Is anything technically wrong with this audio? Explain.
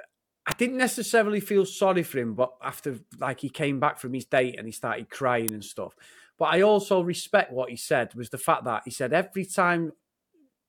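Yes. At 0.51 s, just before "didn't necessarily feel sorry", and at 5.49 s, between "date and he started" and "and stuff", an electrical switching spike snaps over the speech. It is likely arcing from a nearby switch or motor coupling into the line, peaking around -5 dBFS. It shows as a thin vertical waveform spike and a broadband spectrogram streak.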